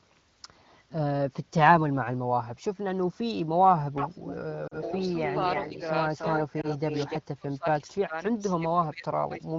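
From 3.95 to 5.8 s, and again from 6.09 to 7.18 s, there is an echo leak. The likely cause is a loudspeaker phone whose echo canceller failed to remove the far voice from its microphone and sent it back down the line. A second copy of the speech trails the original by 294 ms, only a little quieter, at about 5 dB below it, so the talk sounds doubled and smeared.

Within those stretches come lost AMR speech frames. Radio errors corrupted the frames, and the decoder covered each gap by repeating its last good parameters at falling gain. At 4.68 to 4.75 s, about 40 ms go missing, which fits two frames, and the sound drops briefly to near silence. At 6.61 to 6.67 s a shorter gap of about 20 ms gives a quick dip before the voice returns slightly rough.

From 7.18 to 8.14 s, and again from 8.3 to 9.57 s, the speech is suppressed in double talk. With both sides talking at once, the echo control could likely not tell its own talker from returning echo, so it turned the signal down. 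The voice dips and breaks up in pieces, by about 30 dB at worst in the first stretch and about 20 dB in the second. In between, at 8.2 s, a faint echo scrap leaks through at about 30 dB down.

Under all of this, the wideband AMR-WB coding keeps the speech clear, consistent with one of its higher rates.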